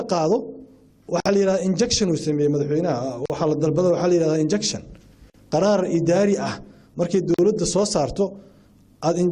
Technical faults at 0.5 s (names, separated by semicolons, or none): none